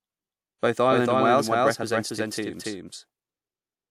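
Speech with a doubled audio track throughout: a second full-band copy trails about a third of a second behind at roughly equal level, likely from capture through a slower second path.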